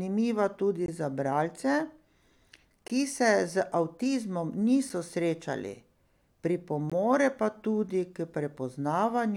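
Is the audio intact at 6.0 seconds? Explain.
Yes, the speech at 6.0 seconds plays through intact, with no dropout, click, distortion or other fault at that moment.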